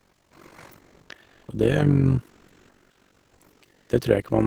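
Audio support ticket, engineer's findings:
Overlap-add ripple throughout. Level pulses at around 50 Hz, about 11 dB deep, heard as a rough robotic flutter on the speech. Frames are windowed and rejoined with an overlap whose gains don't sum flat, so the level dips once per frame.

Comfort noise in place of the background in the pauses at 0.00–0.31 s, 0.80–1.09 s, 1.23–1.48 s, 2.28–3.40 s, 3.52–3.62 s and 3.73–3.89 s. The room tone turns into steady, featureless hiss. It is about 8 dB quieter in the first gap and up to about 4 dB louder in the others. Likely cause: sender-side discontinuous transmission, consistent with Opus DTX, with the receiver synthesising noise while no audio arrives.

Onset clipped by the voice detector at 0.29 s. The first speech enters abruptly, with about 20 ms of its soft start missing and comfort noise up to that point. The sender's voice detector was likely late to flag speech, so the opening frames were never transmitted.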